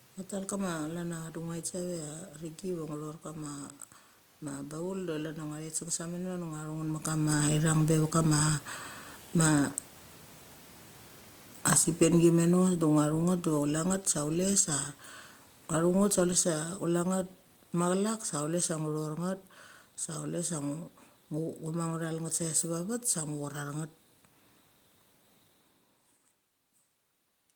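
From 11.5 to 13.67 s the automatic gain falls by about 6 dB, then again from 15.75 to 19.14 s by about 4 dB. The AGC judged the input too loud or its background noise too strong and eased off, so the speech and the room noise sink together.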